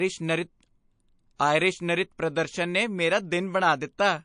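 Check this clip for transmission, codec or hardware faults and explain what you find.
Two codec faults are present, one running through the whole clip and one at a single attack.

MP3 compression throughout: a likely low-bitrate encode, consistent with roughly 40 kbps, strips the treble and flickers weak frequency lines on and off, leaving the speech watery, swirly and dulled.

Pre-echo from 1.36 to 1.4 s, just before "ਨਰਿਤ ਪ੍ਰਦਰਸ਼ਨ ਨੇ ਮੇਰਾ": with no switch to short blocks, coding noise spreads across a roughly 52 ms window, so a hiss about 23 dB louder precedes the attack by 35 ms and smears it.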